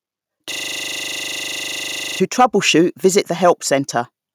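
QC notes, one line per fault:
0.52–2.2 s, system hang loop: a rapid buzzing stutter at 25 Hz as one 40 ms slice of sound repeats 42 times. The playback side froze while the hardware kept cycling through a ring buffer of that length. Little or no sound seems lost.
2.4–2.45 s, 3.05–3.18 s and 3.48–3.5 s, microphone overload: harsh crackling grit on the loudest peaks, pushed about 4 dB, 1 dB and 2 dB past the converter's limit. Their tops are flattened, most heavily at 2.4 s. The likely cause is input gain set too high at the converter.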